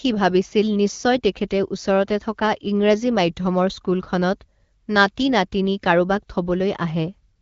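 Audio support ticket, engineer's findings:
No faults found: the speech passes through the AMR wideband (HD Voice) codec path as expected, band-limited with nothing above 7.4 kHz, and the light coding texture fits a rate around 12.65 kbit/s.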